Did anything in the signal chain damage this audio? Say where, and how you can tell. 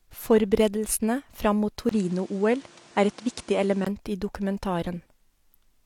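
Yes. Just after "fram mot", at 1.89 s, the speech briefly drops out for about 20 ms and returns duller, with nothing above 10.5 kHz and a new noise floor roughly 30 dB down at unchanged level, until 3.87 s. This likely means the input switched to a poorer device at the driver stage.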